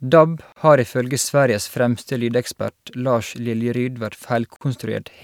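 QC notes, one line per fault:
0.52 s and 4.56 s, gap at a join of encoded pieces: the speech was encoded in pieces about 4 s apart and joined untrimmed. Encoder start-up delay and last-frame padding remain, cutting 39 ms (before "har ifølge") and 49 ms silences with smeared edges.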